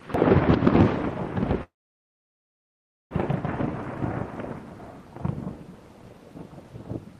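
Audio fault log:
1.63–3.13 s, call audio freeze: the last sound is carried on briefly, then fades into about 1.4 s of silence. The audio resumes exactly where it stopped, so nothing is lost, but everything afterwards runs about 1.5 s late. The likely cause is delayed packets emptying the jitter buffer.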